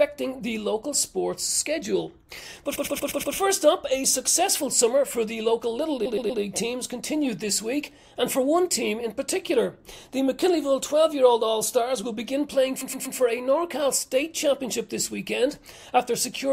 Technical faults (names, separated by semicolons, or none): repeated frames